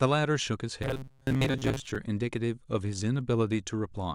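From 0.83 to 1.96 s the speech turns into a robotic sound from repeated short buffers: a stiff metallic buzz near 133 Hz that follows the speech only roughly. Most of that stretch is likely recycled 7.5 ms fragments. Unlike ordinary stutter, the buzz rate stays fixed.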